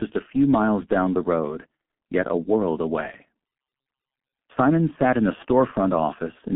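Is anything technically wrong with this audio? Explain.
Yes. G.723.1 codec damage runs throughout: this low-rate telephony coder, heavily degrading the speech and consistent with roughly 6.3 kbit/s, models the voice in coarse 30 ms frames and passes only about 150 Hz to 3.4 kHz. The result is muffled, hoarse speech with smeared consonants.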